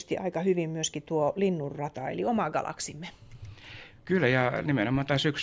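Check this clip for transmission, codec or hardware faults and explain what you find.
Nothing wrong can be heard in this speech recording.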